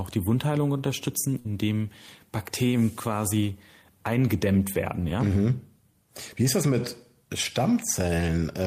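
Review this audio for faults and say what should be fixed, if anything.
A burst of packet loss hits the speech from 1.39 to 1.48 s. The receiver concealed the gap by extending the last received sound for about 54 ms, fading it down. The audio then jumps ahead, with about 60 ms of speech missing. On a spectrogram the last sound is held as a decaying band before an abrupt restart. The waveform shows a sustained, shrinking stretch and then a hard discontinuity. Preventing this calls for a larger jitter buffer, forward error correction or redundancy, or a more reliable network path.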